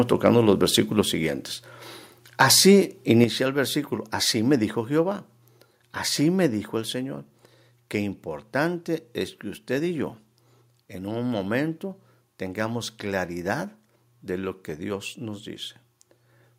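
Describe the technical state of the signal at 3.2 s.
At 3.24 s the microphone volume steps down: the speech and background drop about 6 dB in one instant before "el versículo así me", likely the software lowering input gain, unlike a gradual fade.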